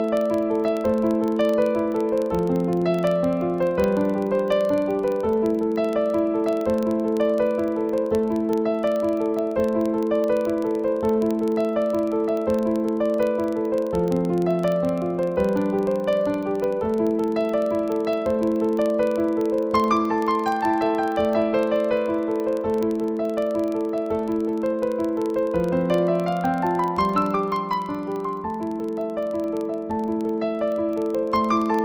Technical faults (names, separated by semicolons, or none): filter restarted on every block